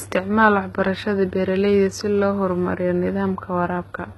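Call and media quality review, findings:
Speech, throughout: gritty, lispy sibilants. Likely HE-AAC compression, band replication faking treble; fits 16 kbps. Spectrogram: patchy copied bands, hard ceiling at 11.8 kHz.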